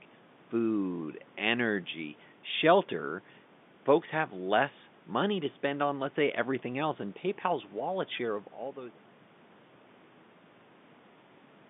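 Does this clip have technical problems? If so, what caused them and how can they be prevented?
No, there are no technical problems to report.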